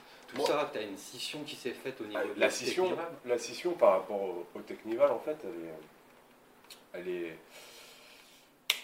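Nothing is technically wrong with it.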